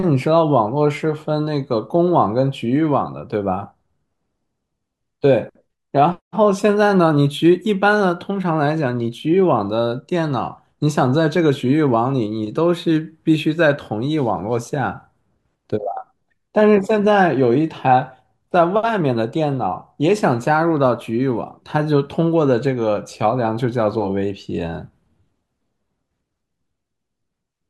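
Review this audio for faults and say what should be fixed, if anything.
No faults can be heard anywhere in this speech recording. There is nothing here that needs fixing.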